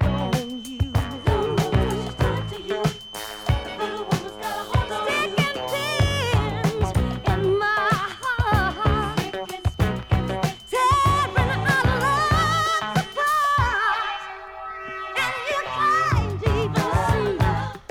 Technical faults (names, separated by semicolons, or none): feedback whistle